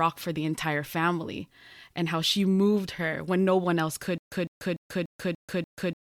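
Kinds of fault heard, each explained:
Stutter with silent gaps: from 4.18 s to the end of the speech, the same 154 ms fragment plays six times, each followed by about 138 ms of dead digital silence, so it returns every 292 ms at a steady pace, likely a stalled player or stream replaying its last buffer on each retry. The exact silent gaps between identical bursts set it apart from a seamless looping stutter or a random dropout, and the speech that should follow is lost.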